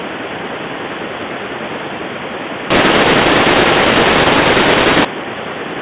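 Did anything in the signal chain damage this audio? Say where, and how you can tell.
Yes, at the codec stage: from 2.70 to 5.05 s the speech turns harsh and gritty, and the gaps fill with hiss. That's a mu-law and A-law mix-up, with A-law G.711 bytes decoded as mu-law, so the level mapping scrambles and the quietest samples rise well above silence.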